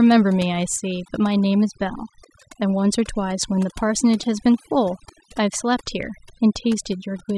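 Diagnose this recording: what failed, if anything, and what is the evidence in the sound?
Overdone noise removal affects the whole speech clip, a failure at the processing stage where a noise suppressor was driven too hard. Between phrases the background falls to near silence, leaving isolated twinkling specks, and the voice's quieter components are gated away with the noise. Unlike low-bitrate codec swirl, which smears the voice and the background alike, the damage here follows a noise estimate, so the background gaps are emptied and quiet speech detail is stripped.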